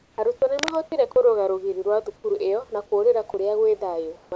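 The speech opens with comfort noise in place of the background from 0.00 to 0.18 s. The sender likely went quiet under discontinuous transmission, and the receiver filled the gap with synthetic noise. The real room noise, about 37 dB below the loud speech, is replaced by a smoother, featureless hiss about 3 dB quieter. On a spectrogram this shows as an even grey wash without the small fluctuations of the real background. The waveform shows a slightly lower, very uniform noise floor.

Between 0.38 and 0.42 s comes sound dropped by the voice detector. The detector likely mistook a quiet stretch of speech for background and stopped sending, so about 20 ms of sound is lost inside a 40 ms patch of steady noise. It is heard as a tiny hole or flutter. A spectrogram shows the speech harmonics breaking off into a flat noise band. The waveform shows a brief envelope dip.

From 0.59 to 0.76 s, just before "kũrũga rũgiri rwa", there is cable scratch noise. 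This is likely a worn cable or connector whose contact resistance jumped as it moved. The result is a burst of rough scratching nearly as loud as the speech, about 5 dB below it. A spectrogram shows ragged broadband vertical streaks, and the waveform shows dense, irregular spikes.

A second dropout by the voice detector falls at 2.16 to 2.24 s, between "kũrũga rũgiri rwa" and "ĩyo na kũrĩra". Here 80 ms is replaced by steady noise and about 30 ms of speech disappears, so the join sounds clipped. The harmonic traces stop abruptly, leaving a uniform noise patch.

Comfort noise returns from 4.16 to 4.32 s, about 5 dB below the real background, which sits about 33 dB under the loud parts. It shows as a flat, even band on a spectrogram.

Within that stretch, from 4.29 to 4.32 s, is an onset clipped by the voice detector. The detector was likely slow to register that speech had restarted, so about 30 ms of the soft beginning was never sent. 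The next sound starts abruptly. The waveform jumps straight from flat noise to full amplitude instead of rising gradually. On the spectrogram the harmonics start with a hard vertical edge, and like everything else they stop at 8 kHz, the limit of the G.722 call path.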